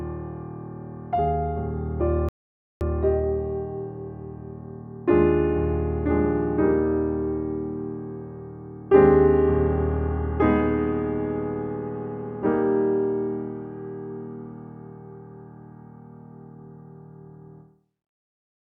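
At 2.29 s there's a rebuffering stall: the player ran dry of downloaded audio and just sat waiting for the next chunk to arrive. You hear the sound drop straight to silence, hang there until 2.81 s, then pick up exactly where it left off. Nothing gets skipped or repeated. It's simply a gap of about 0.52 s pushed into the timeline, so everything after it lands that much later.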